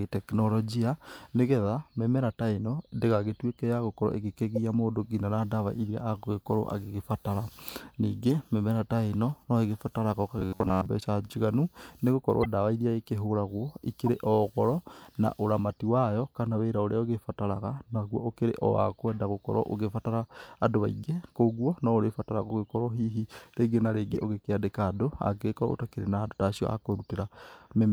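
At 4.56 to 4.58 s and again at 8.23 s, a corrupt frame decoded gives short chirps. Damaged bits in a few compressed frames were decoded anyway, misplacing energy in frequency. The first is fairly prominent, the second faint. From 10.39 to 10.86 s the speech turns into a rigid metallic buzz at 93.8 Hz, robotic sound likely from repeated short buffers of about 10.7 ms replaying over most of that span. Further corrupt-frame blips follow at 12.41 to 12.45 s (the loudest), 14.06 s and 24.13 to 24.16 s.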